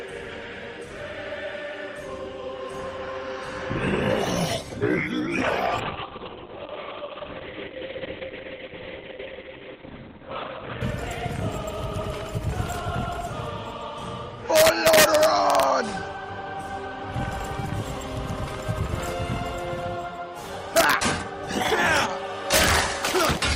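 At 5.8 s a call bitrate drop sets in and lasts until about 10.87 s. The link's bandwidth estimate fell, so the encoder had to spend far fewer bits. Coding turns coarse and rough. The top end collapses from the full 20 kHz band to about 4 kHz, so the sound goes muffled and watery. The worst stretch holds for about 5 seconds. The change fits a cut from around 32 kbps to about 6 kbps.

Integer overflow follows, in five bursts. The first runs from 14.56 to 15.63 s. Shorter ones fall at 20.77 to 20.93 s, at 21.97 s, at 22.54 to 22.79 s, and at 23.21 to 23.25 s. In each, loud peaks pushed a sum past its integer limit by about 1 to 3 dB. The values did not clamp. They wrapped to the opposite sign, throwing the waveform across its full range. The result is harsh, violent cracks, far sharper than ordinary clipping.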